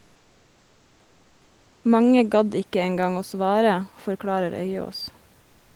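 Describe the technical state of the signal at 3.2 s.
At 3.2 s the speech signal is intact, with only the room's own background noise sitting about 38 dB below the voice.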